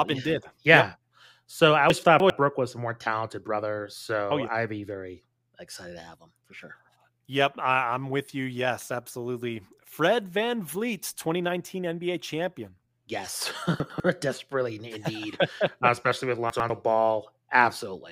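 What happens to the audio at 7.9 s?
Nothing goes wrong at 7.9 s; the speech carries straight through that moment without any dropout, click or distortion.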